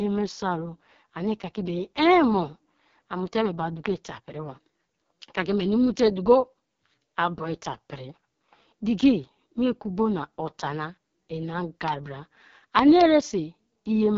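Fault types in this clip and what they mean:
AMR wideband (HD Voice) codec: The speech sounds rough and raspy throughout, with a grainy, buzzy edge and nothing above about 7.3 kHz. This is heavy AMR-WB coding damage: its pulse-driven vocal tract model breaks down at the lowest rates, which fits about 6.6 kbit/s.
loud pop: A sharp single pop sits at 3.86 to 3.88 s, about 15 dB above the speech. A quick double pop follows from 12.79 to 13.03 s, about 20 dB above, with speech continuing underneath. The likely cause is a sudden voltage pulse.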